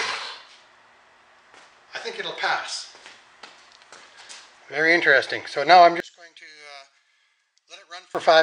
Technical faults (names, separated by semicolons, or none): one channel inverted